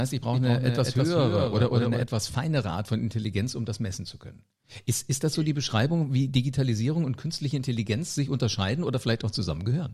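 From 0.33 to 2.03 s there is a doubled audio track, most likely because the signal was captured a second time over a slower path and both feeds were mixed together. A second full-band copy of the speech trails the original by about a fifth of a second at a somewhat lower level, giving a crisp slapback repeat with no reverberant tail or room colour. It switches on and off abruptly at those boundaries.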